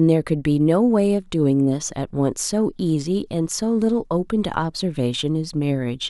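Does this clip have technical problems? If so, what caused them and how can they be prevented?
No, the speech signal shows no technical faults, so there is nothing to trace to a cause or guard against.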